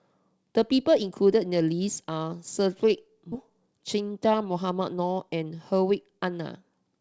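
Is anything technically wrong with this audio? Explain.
Yes, two things stand out in this speech. At 3.32 to 3.34 s there's a skip ahead: a chunk of audio, something like seven-tenths of a second, was thrown away, probably by an overflowing jitter buffer, and the two sides are butted together with no fill, so the talker just lurches forward.

Then from 5.29 to 6.26 s the jitter buffer speed-up kicks in. The buffer was sitting on more delay than it wanted, so it snipped out lots of tiny pitch-period slices, roughly a tenth of a second in total. The speech runs at about 108% speed with the pitch unchanged, so it sounds a bit rushed.

Throughout, the band stops at 8 kHz, which fits a G.722 call path.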